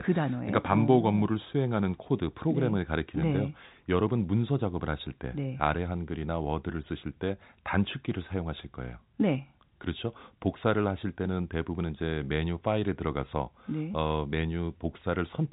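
No technical faults occur at any point in the speech, which carries the narrow telephone band of G.711 coding with nothing above about 3.8 kHz.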